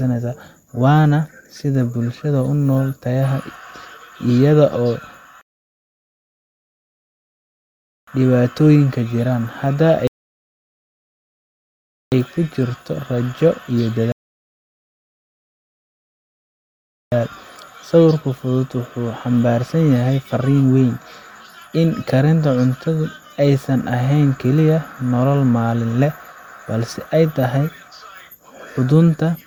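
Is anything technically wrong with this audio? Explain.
Yes. The speech has three rebuffering stalls: at 5.41 to 8.08 s, 10.07 to 12.12 s and 14.12 to 17.12 s. Each time, the player drained its stock of downloaded audio and halted until more data came in. The speech drops abruptly into silence for 2.66 s, 2.05 s and 3.0 s, then picks up at exactly the point where it broke off. Nothing is skipped, but the clip runs about 7.7 s longer in total.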